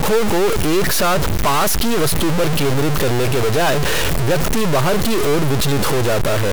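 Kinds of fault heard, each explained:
Stuck bit: harsh, buzzy distortion rides on the speech the whole way through, and the pauses fill with gritty noise instead of going quiet. That points to one data bit likely jammed at a fixed value, a fairly high one, with errors around -15 dBFS.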